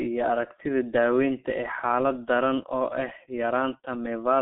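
Speech that sounds muffled, hoarse and thin from start to finish, with consonants smeared together and nothing above about 3.6 kHz. This is G.723.1 codec damage: a narrow telephone band of 200 Hz to 3.5 kHz and a coarse, slowly updated voice model, which fits a low bitrate around 6 kbit/s.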